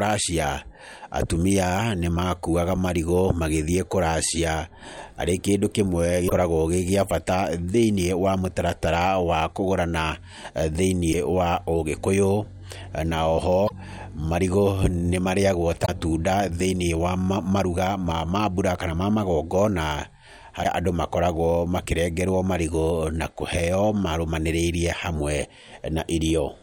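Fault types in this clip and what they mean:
Damaged data in a compressed stream: corrupted bytes in the encoded speech made the decoder misread frames and lose sync, so five brief glitches of 50 to 70 ms break through at 6.26, 11.09, 13.65, 15.82 and 20.60 s, the second just before "wa ũgĩkũyũ".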